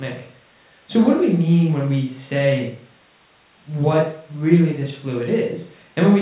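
No faults found; the speech carries the expected G.711 A-law call-path character at 64 kbps, with nothing above 4 kHz.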